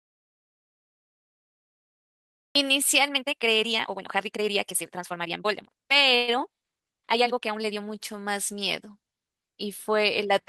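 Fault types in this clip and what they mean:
audio dropout to silence: The clip opens in dead silence with no room tone at all, and the speech comes in mid-flow at 2.55 s. The input was likely lost for that stretch while silence was written, so whatever came before is gone.
time-stretched section: From 3.06 to 7.81 s the speech runs at nearly double pace, 1.98 times, sounding rushed while the pitch stays unchanged. This likely comes from software squeezing the section to fit a length by dropping short pieces.
call audio freeze: From 6.15 to 6.39 s the last sound is held as a brief continuation rather than falling silent. The speech then resumes where it stopped, with nothing missing but about 124 ms of gap inserted, likely from delayed packets emptying the jitter buffer.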